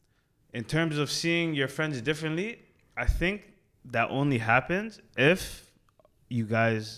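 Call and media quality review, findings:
No dropouts, distortion, level problems or timing defects are present in the signal, and the speech path shows no impairment attributable to the capture, transport or playback chain.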